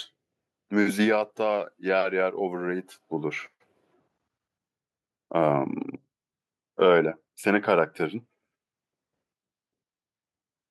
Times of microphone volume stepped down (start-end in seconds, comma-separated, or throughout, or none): none